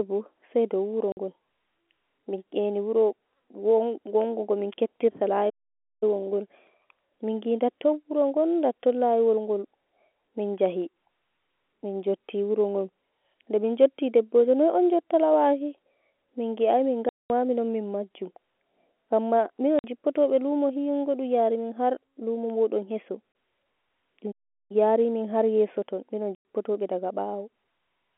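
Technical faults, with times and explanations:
1.12 to 1.17 s, 17.09 to 17.3 s, 19.79 to 19.84 s, 23.32 to 23.35 s and 26.35 to 26.45 s: packet loss filled with silence. The speech drops out cleanly for 50, 210, 50, 30 and 100 ms, the longest right after "mingi ai" and the last after "har yeso ton minon". Every gap is a multiple of 10 ms, which fits 10 ms packets going missing with the receiver playing silence in their place. The abrupt cut in and out gives each hole hard edges.
5.49 to 6.03 s and 24.31 to 24.72 s: playback stall. Just after "gamin keptirta" the audio halts mid-flow for about 520 ms, and later it goes quiet again for about 380 ms. These pauses are far longer than the packet holes and don't fall on 10 ms steps. That makes the likely cause the player running dry or its thread getting blocked, so output sat silent until it caught up and resumed.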